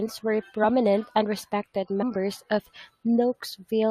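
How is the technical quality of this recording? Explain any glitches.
The recording has one glitch, a case of compressed frames skipped, from 2.01 to 2.04 s, right after the speech "and respected". Around 70 ms of audio never gets played. The decoder either found those frames missing from the stream or rejected them as corrupt, so playback jumps straight to later material. The result is a small forward jump in the speech.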